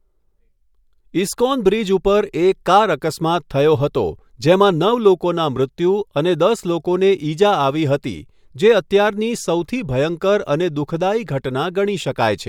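No technical faults are audible.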